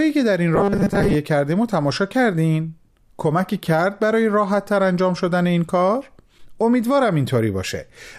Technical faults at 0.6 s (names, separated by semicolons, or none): robotic sound from repeated short buffers